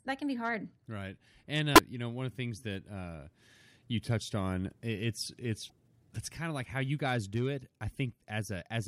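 At 1.74 to 1.79 s, just before "you know one of", and 5.66 to 5.71 s, between "you touched on it's" and "that's kind of like", damaged data in a compressed stream makes the decoder lose sync, producing brief glitches.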